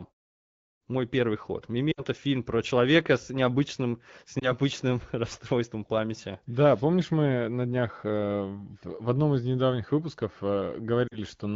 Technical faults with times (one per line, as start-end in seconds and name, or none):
1.92-2.02 lost AMR speech frames
4.39-4.53 lost AMR speech frames
11.08-11.18 lost AMR speech frames